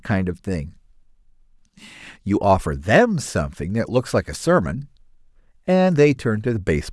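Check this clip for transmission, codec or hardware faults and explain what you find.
No transmission, codec or hardware faults turn up anywhere.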